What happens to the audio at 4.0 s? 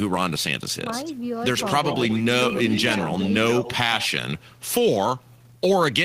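At 4.0 s you're inside an echo leak, 3.5 to 4.09 s: a copy of the speech returns about 120 ms late and roughly 10 dB down, likely from a loudspeaker-side echo canceller letting it through.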